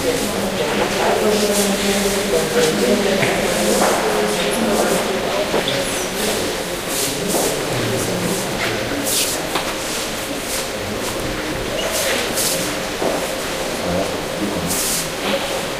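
A recording of sounds with a single dropped buffer (overrun) at 13.4 s: the sound jumps forward, with roughly 40 ms missing. The likely cause is the recording software falling behind so that incoming samples were overwritten before being collected, leaving the two sides spliced together. What sets it apart from an underrun is that no silent gap or repeated fragment is inserted; the sound simply skips ahead with nothing in between.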